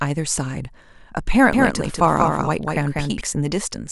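From 1.53 to 3.21 s the speech gains a flat, full-band repeat about 200 ms behind and about 5 dB quieter, switching abruptly on and off: a doubled audio track, likely from a second, slower capture path.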